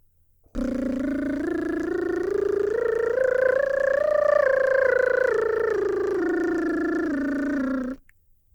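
It's a short piece of music, and there's nothing technically wrong to point to anywhere in it.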